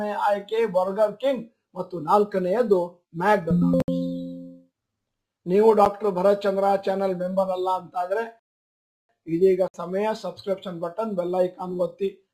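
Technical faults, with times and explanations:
3.82 to 3.88 s, 5.85 s and 9.68 to 9.74 s, block of digital silence: the audio drops abruptly to nothing and snaps back with no fade. The two 60 ms gaps are heard as short holes, and the 9 ms one as a single tick. The samples in each block were replaced with zeros, most likely because the output buffer was not filled in time.
8.39 to 9.09 s, rebuffering stall: the sound halts into silence for about 0.7 s, then picks up exactly where it left off with nothing skipped. The player ran out of downloaded audio and waited for more data before continuing. No audio is lost, but roughly 698 ms of dead time is inserted into the playback, so everything after the pause arrives later than it should.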